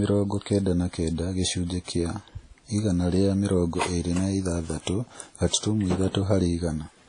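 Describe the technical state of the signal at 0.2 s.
At 0.2 s the speech has been through lossy coding, likely WMA compression at a low rate, which fits roughly 32 kbps. The encoder's long transform blocks smear quantisation noise over tens of milliseconds and discard weak spectral detail, with nothing above 10.1 kHz. The damage is plainly audible and present throughout the clip, not just at this moment: a ringing, washy texture with a hiss that swells and fades along with the speech.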